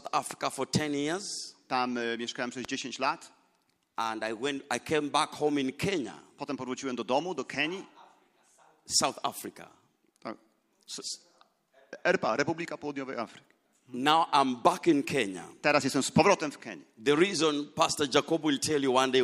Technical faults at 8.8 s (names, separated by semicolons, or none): none